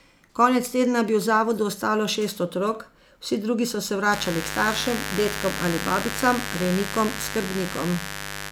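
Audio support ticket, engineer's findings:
Mains buzz from 4.09 s to end of clip (8.51 s). Steady, raspy buzz under the speech, about 10 dB below it. Probable component: dimmer, rectifier or unshielded cable coupling switching spikes at 100 per second from 50 Hz mains. Spectrogram: comb of lines at 50 Hz multiples up to several kHz. Waveform: regular spikes every 10 ms.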